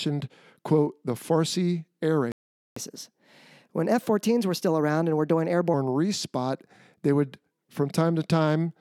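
A playback stall at 2.32 s cuts the speech off mid-flow, and the output stays silent for about 0.45 s until 2.76 s, when the talker resumes. The gap most likely comes from the player running dry of buffered data or having its audio thread held up, so nothing reached the output until it recovered. Catch-up at higher speed follows from 2.76 s to 5.74 s. The player resamples its backlog to run at 1.15 times normal speed, so the speech sounds hurried and raised by about two semitones, and then both settle back to normal once the lost time has been made up.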